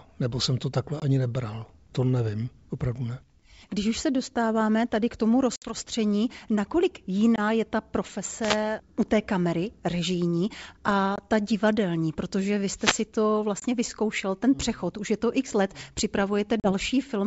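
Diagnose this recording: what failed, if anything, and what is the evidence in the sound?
Packet loss on an ADPCM call, a network-stage fault, produces hard-edged holes at 1.00 s, 5.56–5.74 s (after "dostáváme tady k tomu"), 7.36–7.40 s, 11.16–11.19 s (before "ta divadelní protože vy"), 13.60–13.64 s (before "vyzkoušel ten přechod už") and 16.60–16.72 s. The missing audio amounts to 20 to 60 ms each time, consistent with one to three lost packets. The gaps are filled with silence. The decoder's predictor and step size lose track of the sender's, so the sound returns slightly distorted, settling within tens of milliseconds. The G.722 wideband path itself, consistent with its 64 kbit/s mode, adds little or no damage of its own.

A wireless microphone noise hit occurs at 8.41–8.58 s and 12.76–13.05 s. This is an analogue radio-link fault upstream of the call. Reflections cancel the FM signal, receiver noise rises through the fade, and each event is heard as a brief swish or burst of static over the speech.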